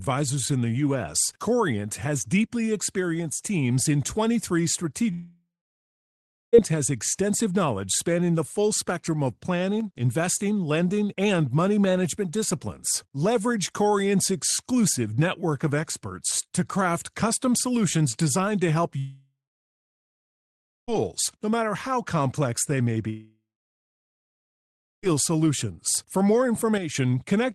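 At 5.11 to 6.55 s there is a long network dropout, likely from packets that stopped arriving for about 1.4 s. The receiver stretches the last sound into a fading buzz, then leaves roughly a second of near-silence before the audio resumes with that stretch missing.

From 9.81 to 9.98 s there is a sudden gain jump, likely a digital gain change applied without a ramp. The voice and background noise drop together by about 4 dB in a single step.

At 18.99 to 20.90 s another long network dropout, likely the same kind of packet loss, removes about 1.9 s of audio. The concealment buzz fades into about 1.5 s of silence before the audio picks up again past the lost stretch.

From 23.10 to 25.08 s a third long network dropout, likely once more from lost packets, cuts out about 1.9 s. The same decaying fill gives way to about 1.6 s of silence, and the audio returns without the lost part.

At 26.78 to 26.95 s a second sudden gain jump, likely another unramped gain step, lowers the voice and noise floor together by about 8 dB at once.

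Under all of this, the Opus call codec adds its coding noise, and nothing is heard above 12 kHz.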